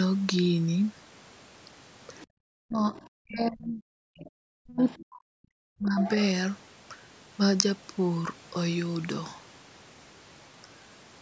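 From 2.16 to 2.26 s, a faint second voice comes through, about 30 dB below the speech. This is the other side's voice leaking through. The likely cause is loudspeaker echo the canceller missed. Right after, from 2.26 to 2.36 s, the room sound drops by about 39 dB for a tenth of a second. That is background gated by the echo canceller, which clamped the microphone hard. From 2.64 to 3.88 s the talker's speech dips by as much as about 40 dB. This is speech suppressed in double talk, likely because both sides spoke at once. Inside that span, from 2.94 to 3.08 s, the leak returns at about 25 dB down. It comes back from 4.18 to 5.05 s, again about 25 dB down. Speech is suppressed once more from 4.5 to 6.0 s. The loudest leak follows, from 6.01 to 6.23 s, only about 15 dB under the speech.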